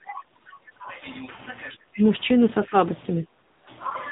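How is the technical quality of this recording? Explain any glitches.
The recording is plainly degraded by a low-rate mobile codec, with several short dropouts and level dips on top.

AMR narrowband mobile codec, throughout: the speech passes through an 8 kHz vocal-tract model that rebuilds every 5 ms from a few pulses. Nothing above 4 kHz survives, and the thin, buzzy, synthetic tone fits a low mode around 7.4 kbps.

Speech suppressed in double talk, 0 to 1.04 s and 2.66 to 2.74 s: across most of the first second the voice sinks by up to roughly 20 dB, and by about 10 dB in the second dip. This is likely an echo canceller mistaking overlapping talk for echo and turning the speech down.

AMR comfort noise, 0.44 to 0.46 s, 0.72 to 0.76 s, 0.78 to 0.80 s and 3.48 to 3.64 s: in these gaps the sender stopped transmitting speech frames, and the receiver filled them with smooth synthetic noise. 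The real background gives way to that noise.

Background gated by the echo canceller, 3.26 to 3.36 s: the canceller clamped the microphone while the loudspeaker played. The room sound drops by about 14 dB for roughly a tenth of a second, then returns when the gate releases.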